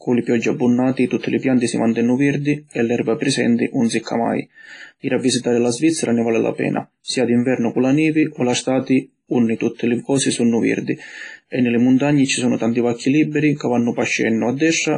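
Throughout, likely WMA compression starving the speech of bits, consistent with about 24 kbps, removes everything above 10.6 kHz and leaves heavy ringing, washy hiss.

From 7.04 to 7.08 s, pre-echo: noise sized for a sharp attack fills the preceding quiet, adding 38 ms of hiss and smearing the onset.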